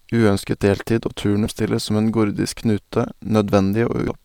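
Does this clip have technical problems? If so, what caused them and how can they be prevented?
Yes. The speech carries damaged data in a compressed stream at two points: a single instant at 1.46 s, and a longer stretch from 4.08 to 4.11 s. Corrupted or missing bytes in the encoded file left the decoder unable to read those frames correctly, so it lost synchronisation and had to hunt for the next valid frame header. That brief decoding failure comes through as a short blip or squawk that breaks into the speech. Transferring and storing the file over checksummed, error-corrected channels, and verifying its integrity before playback, would prevent this.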